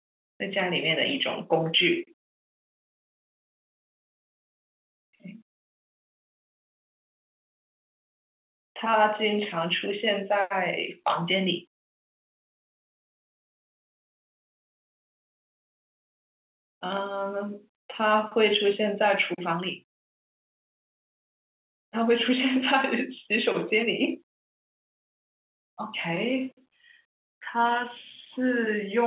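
Speech over an ordinary G.711 mu-law telephone path at 8 kHz, with no faults present.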